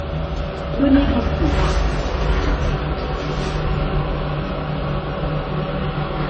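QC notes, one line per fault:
Throughout: transcoding between lossy codecs. Nothing exists above 8.3 kHz, and two kinds of swirly, smeared artefacts overlap, likely from a low-rate HE-AAC encode re-encoded as 32 kbit/s MP3. A spectrogram shows a flat ceiling at 8.3 kHz and patchy, holed bands below it.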